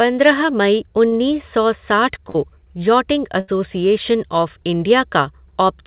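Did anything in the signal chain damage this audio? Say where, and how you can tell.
Yes. The damage happened on the network, with the receiver covering the gaps. In the narrowband call path, where nothing sounds above about 4 kHz, consistent with a 64 kbps G.711 codec, there is short concealed packet loss at 1.08 to 1.14 s. Roughly 40 ms of the speech never arrived in time, and the receiver filled about 36 ms by extending the preceding sound before blending back. It is heard as a brief smear or wobble rather than a dropout. Unlike a burst, it does not turn into a held buzz or fade, and the speech blends back into the real audio.

There are two bursts of packet loss, at 2.30 to 2.36 s and at 3.40 to 3.50 s. About 40 ms and then about 80 ms of speech went missing. The receiver stretched the last sound over about 46 ms and 76 ms, letting it decay, so it becomes a held buzz or fading hiss, and the speech resumes further along with material skipped. 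That audible decay and the jump forward set these apart from the short smear at 1.08 s.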